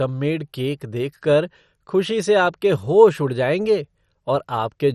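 Throughout the speech, the sound is dull and carries a gurgling, granular roughness. Nothing is present above about 14.2 kHz, and the upper detail flickers in and out as whole bands drop away. This is likely MP2 compression, with so few bits per sub-band that the heavy damage fits a low rate of around 56 kbps. A simple low-pass filter would leave a steady, clean dullness, but here the coarse quantisation of the surviving bands adds the grainy gurgle.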